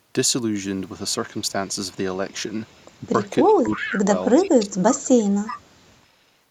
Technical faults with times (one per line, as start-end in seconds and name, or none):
3.44-3.93 echo leak
3.47-4.10 speech suppressed in double talk
4.36-5.23 speech suppressed in double talk
4.45-4.50 echo leak
5.46-5.60 echo leak